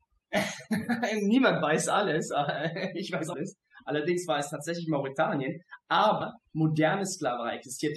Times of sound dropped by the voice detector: none

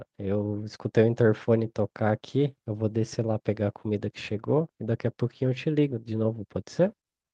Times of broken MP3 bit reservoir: none

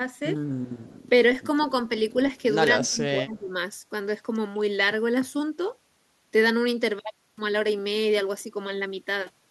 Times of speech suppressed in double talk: 2.71-3.54, 4.54-4.61

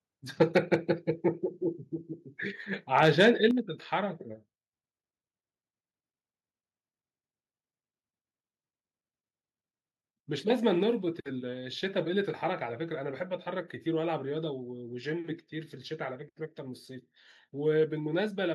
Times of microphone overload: 0.41-0.75, 2.98-3.46

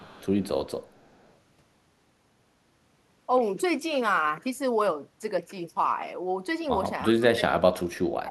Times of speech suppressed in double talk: 7.08-8.31

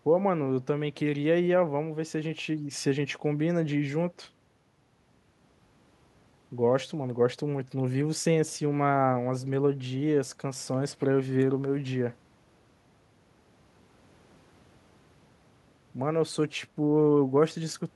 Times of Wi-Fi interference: none

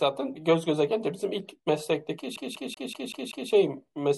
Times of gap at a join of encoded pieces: none

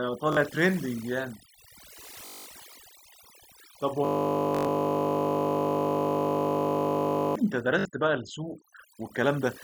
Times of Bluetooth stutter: 0.33-0.37, 2.26-2.46, 4.55-4.67, 7.79-7.85

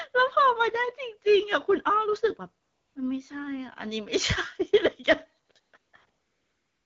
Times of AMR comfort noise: 2.61-2.95, 5.45-6.86

